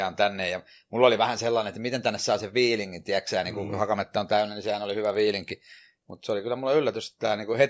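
From 2.95 s to 6.35 s, after "miten tänne saa sen", the speech carries a 20 Hz buzz from a resampler restarted on every block: each 50 ms block was converted from 48 kHz to 16 kHz in isolation, leaving an error at every edge. Unlike mains hum, it vanishes whenever the signal drops out.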